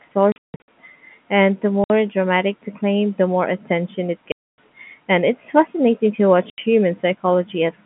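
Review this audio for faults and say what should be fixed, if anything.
The speech has packet loss filled with silence in four places:
0.32 to 0.68 s: about 300 ms drops out in scattered bits, with the longest hole 160 ms.
1.84 to 1.90 s: just before "dramatic the claim the".
4.32 to 4.58 s: right after "the more attention it".
6.50 to 6.58 s: after "it's fascinating to watch".

The hole lengths fit 20 ms packets. Plain silence replaces each one, so every gap has hard edges.

To prevent it, add forward error correction on the link and proper packet loss concealment at the receiver.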